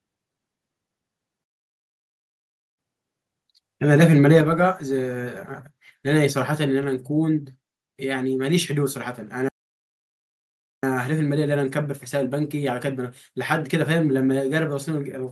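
Speech clip with two playback stalls, each a silent gap of about 1.35 s, from 1.44 to 2.79 s and from 9.49 to 10.83 s. The likely cause is the player running out of buffered data or its audio thread being blocked, so output stops mid-flow until it recovers. Between 4.35 and 4.38 s there is microphone overload: the peaks exceed the converter's limit by about 1 dB, and a small fraction of samples are flattened, giving a brief harsh crackle on that loud stretch. The input level was likely set too high. At 4.41 s, just after that distorted peak, the microphone volume is stepped down by about 5 dB, and voice and background drop together in one abrupt step, likely the call software's automatic gain control reacting to the clipping by lowering the device's input volume.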